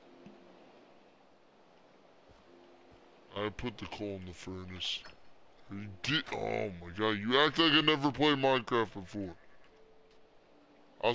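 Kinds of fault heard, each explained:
Wrong sample rate: Throughout, the sound is sluggish and dark, running at about two-thirds speed and sitting roughly 7 semitones low. Speed and pitch fall together by one ratio, which points to 24 kHz material played back at 16 kHz without conversion.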